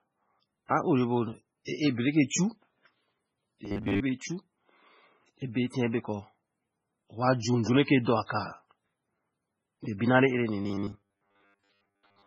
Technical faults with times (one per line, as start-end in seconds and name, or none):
0.00-12.27 MP3 compression
1.65-1.67 pre-echo
3.65-4.00 robotic sound from repeated short buffers
5.38-5.42 pre-echo
8.26-8.29 pre-echo
9.98-10.01 pre-echo
10.62-12.26 robotic sound from repeated short buffers